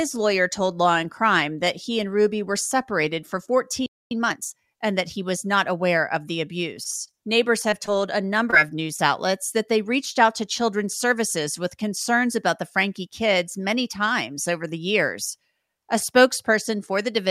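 At 3.86 s the speech stops dead for about 0.25 s. This is a playback stall, likely from the player running out of data.

From 4.11 to 4.59 s comes time-compressed catch-up. The player trims its backlog, so speech runs 1.5 times fast at normal pitch.

Between 6.83 and 8.03 s there are scattered short gaps. About five small holes are patched by continuing the last sound, heard as brief ticks and hiccups.

At 8.50 to 8.54 s a short concealed packet loss appears. About 20 ms never arrived. The filler blends back in, leaving a quick smear.

At 8.96 to 9.00 s there is a short stall from a late packet. The last sound is held 20 ms too long, with a slight buzz or dip, and nothing is lost.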